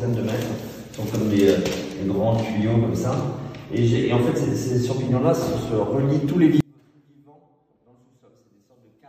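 An audio dropout to a faint residue begins at 6.61 s and lasts to the end of the clip. The sound cuts off abruptly mid-flow rather than fading, and what remains is a faint leak of the signal roughly 35 dB below its normal level. The likely cause is a break in the feed ahead of a stage that stayed live, so only a small leakage path continued to pass audio after the interruption.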